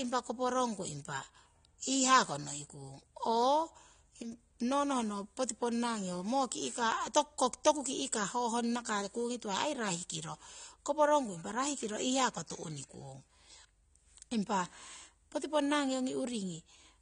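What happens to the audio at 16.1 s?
At 16.1 s, as throughout, AAC compression: nothing above 9.7 kHz and fizzy, warbling sibilants, likely from low-bitrate quantisation; a plain low-pass filter wouldn't warble.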